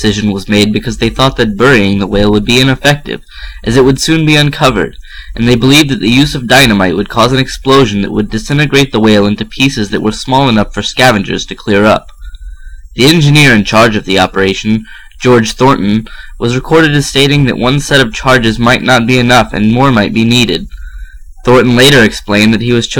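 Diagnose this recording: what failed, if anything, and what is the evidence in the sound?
Hard clipping runs through the whole recording. The level was driven about 14 dB past what a stage, likely the converter input or a fixed-point format conversion, could pass, so roughly one sample in twenty is cut flat. That gives harsh fuzz on every loud passage. The abrupt flat tops, rather than the rounded compression of soft saturation, put the added harmonics high up the spectrum.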